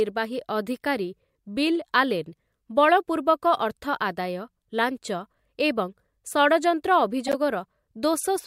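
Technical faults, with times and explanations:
7.27–7.35 s, corrupt frame decoded: flipped bits in the compressed stream reached the decoder, which played a few damaged frames anyway. Misread gains and codes put energy at wrong frequencies, so an 80 ms glitch peaking at about -10 dBFS sits in the speech.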